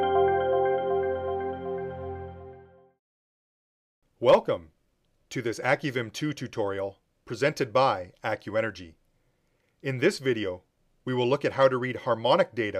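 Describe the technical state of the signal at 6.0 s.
At 6.0 s the signal is intact, with no audible dropout, distortion or other fault at that moment.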